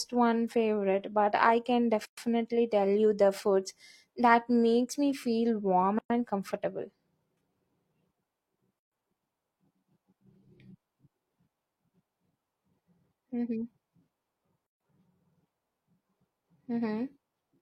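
The speech drops into short silences at 2.05, 5.99, 8.79 and 14.67 s, each a gap at a join of encoded pieces lasting 114 to 138 ms. Separately encoded chunks were butted together untrimmed, so encoder delay and end padding survive as holes with smeared edges before the sound picks up again.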